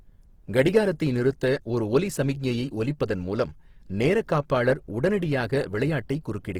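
Opus compression runs through the whole speech clip, from start to finish. The damage is plainly audible: the voice sounds rough and grainy, with a noisy texture where clean tone should be. The band stays open to about 20.3 kHz, so nothing is muffled. This is likely low-rate Opus in its music mode, keeping each band's energy but filling starved bands with folded or noise content. The graininess fits a rate near 16 kbps.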